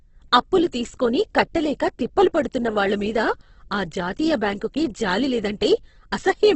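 Opus compression damages the speech throughout, heavily. Nothing survives above 8.1 kHz, and the sound turns rough and grainy rather than swirly. This is likely a low-rate Opus stream in music mode, near 12 kbps, filling starved bands with folded or noise-like content.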